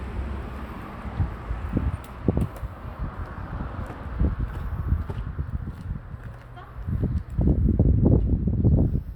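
Everyday sounds, no technical faults heard anywhere in the recording.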